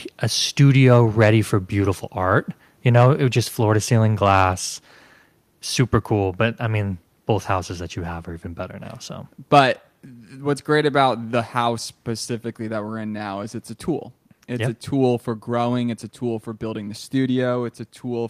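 From 2.96 to 3.06 s, just before "it was just floor", the loudest part of the speech picks up a brief harsh, crackly edge. This is microphone overload, likely from the input being set too hot, so the peaks ran past the converter's ceiling by about 1 dB and their tops were sheared flat on a small share of samples. Unlike codec distortion, the grit appears only on the peaks and disappears once the level falls.

At 4.53 s, right after "just floor to ceiling", the whole signal, voice and background together, drops by about 3 dB in a single instant. This is the microphone volume being stepped down, likely by the call software reacting to the earlier overload and cutting the device's input gain in one move. An automatic gain control would ride the level smoothly over time. Here the step is abrupt, and the lower level then holds steady.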